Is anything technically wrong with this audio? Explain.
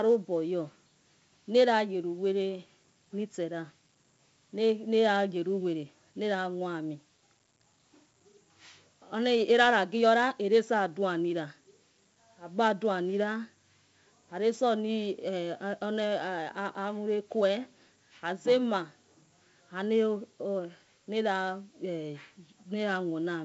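Yes. Across the whole speech clip, the audio has been through 4-bit ADPCM compression. Each sample is coded as a small 4-bit step from a predicted value, with the step size adapting as the signal moves, which fits a 64 kbps stream. The damage is heavy: a gritty hiss rides on every loud syllable and rises and falls with the level. Nothing remains above 7.7 kHz, which points to a low sample rate and gives a dull, muffled top end.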